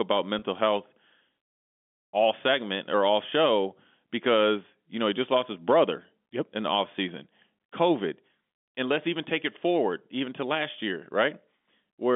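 Right at the start, from 0.39 to 0.42 s, there's a packet loss with pitch repetition: about 30 ms of the telephone-band G.711 speech goes missing, which fits three 10 ms packets, and the receiver loops the last pitch cycle to cover it, so you hear a brief, slightly buzzy held tone.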